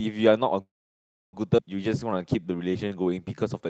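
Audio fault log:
0.61–1.36 s, call audio freeze: the sound stops and is carried on briefly as a fading buzz, then about 0.65 s of silence, likely because packets stalled and the jitter buffer ran dry. Playback resumes where it left off, with nothing lost. On a spectrogram, harmonic bands smear into a fading smudge before a blank 0.65 s gap.
1.57–1.61 s, skip ahead: roughly half a second of audio is discarded, and the sides before and after are spliced together with a fill of only 9 ms. The waveform shows an abrupt envelope discontinuity, and on a spectrogram the formant tracks break and restart at unrelated positions with no transition between them.
1.89–3.63 s, jitter buffer slow-down: the receiver repeats single pitch periods to rebuild its reserve, adding 263 ms, so the audio plays at 85% speed with its pitch unchanged and vowels drawn out. On a spectrogram the harmonics stay level while the syllables are stretched horizontally. 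The waveform shows repeated identical cycles, all beneath the call codec's 8 kHz bandwidth ceiling.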